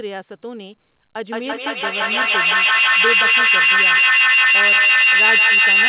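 From 1.17 s to the end, a feedback howl builds: the microphone-to-loudspeaker loop gains level on each pass, so repeats grow rather than decay, narrowing to a tone around 3 kHz, with a loop delay of roughly 150 ms, and peaking about 13 dB above the speech, beneath the call's 4 kHz band limit.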